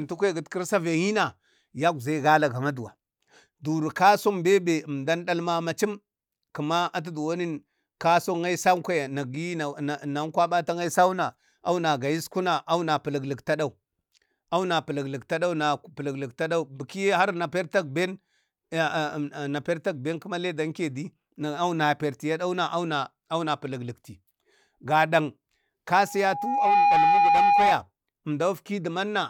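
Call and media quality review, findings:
Loudspeaker feedback squeal, 26.04 to 27.76 s. Pure tone at 816 Hz swells over a bit under a second to a few dB above the speech, then stops. Probable component: open mic picking up its own loudspeaker; loop gain above unity at 816 Hz. Spectrogram: single bright horizontal line at 816 Hz thickening as it builds. Waveform: envelope ramping up into a steady dense sinusoid.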